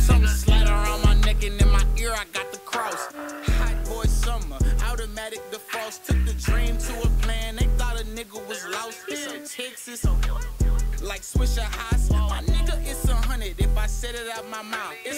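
From start to finish there's low bit depth with dither: only 7 bits, so the rounding error becomes a steady, even hiss sitting roughly 30 dB under the sound.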